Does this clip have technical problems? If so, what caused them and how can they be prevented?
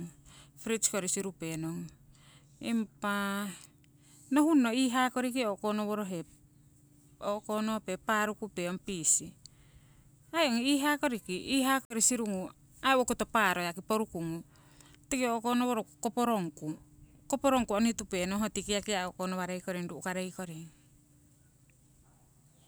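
Yes. Between 11.85 and 11.95 s, just before "sirungu aii owokoto", the speech cuts to a dead gap of about 52 ms and then resumes. This is a Bluetooth stall, likely caused by radio interference holding up packets until the headphones' buffer ran empty and playback waited for the retransmissions. Unlike codec packet loss, the gap is true silence rather than a smeared or warbling fill-in, and unlike a hard edit, the sound picks up where it paused. Keeping the phone close to the headphones, away from crowded 2.4 GHz sources, helps prevent it.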